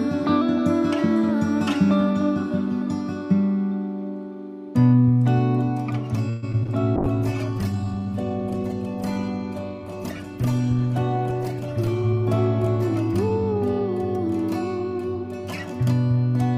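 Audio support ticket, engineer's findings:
Repeated packet loss (robotic sound), 6.29–6.70 s. Choppy stretch with four gaps, the longest 130 ms. Receiver concealment kept stretching the last bit of audio, about 41% of that span, and still left 60 ms as actual holes.

Call bitrate drop, 6.97–14.66 s. Sound goes rough and muffled, highs gone. Bandwidth estimate fell and the encoder went from 128 kbps down to 18 kbps, sitting at the bottom for about 4.9 s. Coarse coding plus a low-pass at that rate.

Jitter buffer slow-down, 7.72–8.00 s. Audio drags at about 89% speed with pitch unchanged. Buffer was building reserve by repeating single pitch periods, adding 40 ms over the stretch. Drawn-out feel.

Jitter buffer speed-up at 11.87–12.23 s (110%), 12.95–13.81 s (104%) and 14.79–15.25 s (107%). Audio runs faster at the same pitch. Buffer was trimming excess delay by cutting short pitch-period chunks, roughly 40 ms each time.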